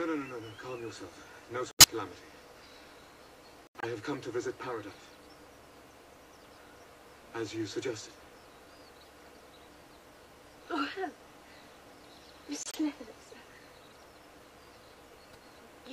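Seven stretches of corrupt frames decoded, at 1.71–1.88, 3.67–3.86, 4.91, 8.99–9.09, 12.63–12.77, 13.89–13.94 and 15.29–15.36 s. Damaged compressed data was played as if valid. Energy lands at wrong frequencies, giving chirps and noise bursts. The first is loud; most later ones are faint.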